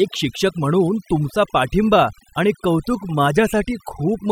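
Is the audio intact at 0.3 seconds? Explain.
No. At 0.3 seconds the speech is affected by overdone noise removal, which runs throughout the clip. Noise reduction set too strong pushes individual frequency bands down or off whenever they come close to its noise estimate, taking quiet parts of the speech with them. The background drops and breaks up into twinkling, warbling specks. Unlike a noise gate, which mutes everything at once, this removes bands one at a time.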